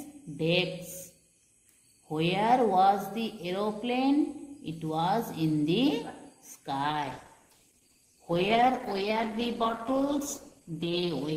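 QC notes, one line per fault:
6.9–11.37 s, call bitrate drop: the sound turns rough and watery and loses its top end until the clip ends, which fits the encoder being pushed from about 64 kbps to 11 kbps; unlike packet loss, nothing drops out, and the coarseness separates it from plain low-pass filtering.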